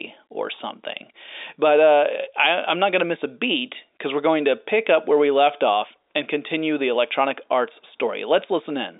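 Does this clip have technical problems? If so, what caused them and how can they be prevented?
No, no technical faults.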